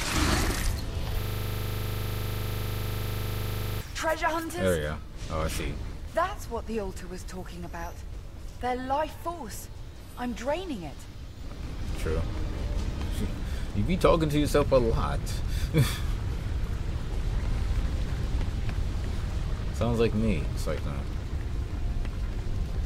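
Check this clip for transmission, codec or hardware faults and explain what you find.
One hardware-level fault is present: a system hang loop from 1.21 s to 3.81 s. The computer or its audio driver stalled, but the sound hardware kept reading the same stretch of its ring buffer. A 40 ms slice of audio repeats about 65 times at 25 Hz, which fits a buffer of roughly 40 ms. At that rate the repeats sound like a harsh, rattling buzz, a frozen fragment droning mechanically until playback resumes.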